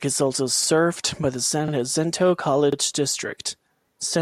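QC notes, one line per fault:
1.68–1.73 s and 2.73–2.77 s, overlapping chunks: at each join roughly 1.0 s apart, the next chunk begins before the last ended, so 44 ms of speech plays twice, heard as a stutter. Unlike a dropout, nothing goes missing; a short piece repeats.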